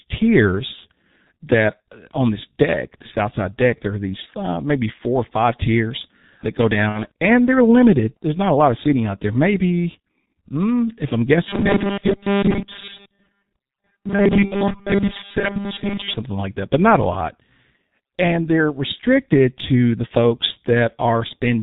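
The whole 22-second speech recording runs through the G.723.1 codec at 6.3 kbit/s, and the damage is heavy. Nothing above 4 kHz survives, so the sound is muffled, and the codec's slow-updating voice model in 30 ms frames leaves it hoarse, with consonants smeared into each other.

From 6.89 to 7.04 s, between "five tiers that go" and "and they're limited", there is VoIP packet loss concealed by the speech codec. About 60 ms of audio went missing, which fits two 30 ms frames. The decoder filled the gap by extending its last pitch and filter settings at falling gain, so the sound stretches into a tail that fades. Because each frame depends on the one before, the sound stays thin and distorted briefly after real audio returns.

From 11.49 to 16.15 s, after "mm if I'm" and ending before "like that but not", the sound becomes a rigid metallic buzz at 200 Hz that still loosely tracks the speech. 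Most of this stretch is repeated material. The likely cause is robotic sound from repeated short buffers: audio arrived late, and the last few milliseconds were looped in its place. A 200 Hz buzz fits a 5 ms buffer.

Inside that stretch, at 14.45 to 14.53 s, a second concealed packet loss covers about 60 ms. It adds a brief fading tail on top of the robotic sound, followed by the same weak recovery.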